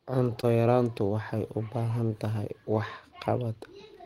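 A brief smear at 0.41 to 0.45 s, just before "yaraantu waxay u baahan", in this speech clip is short concealed packet loss: about 20 ms never arrived and the decoder papered over it by extending the preceding sound.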